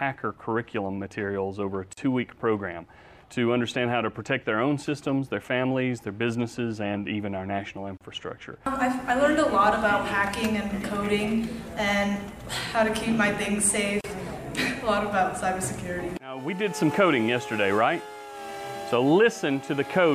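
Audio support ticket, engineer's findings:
Gap at a join of encoded pieces: about 40 ms dropout at 1.93 s, 34 ms at 7.97 s and 14.01 s, every 6 s. Separately encoded segments were concatenated untrimmed, leaving encoder delay and padding. Waveform shows flat, slightly smeared notches. Spectrogram shows thin vertical blank stripes.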